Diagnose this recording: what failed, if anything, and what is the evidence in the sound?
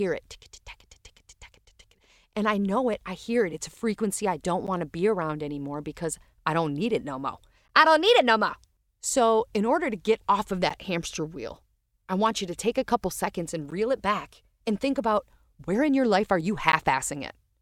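Gap between chunks at the chunked storage or playback stage: hard-edged 13 ms holes at 1.65, 4.67, 7.68, 10.69, 13.71 and 16.72 s, such as after "a frequency I don't". Silence is inserted after each 3 s chunk, interrupting the speech without losing any.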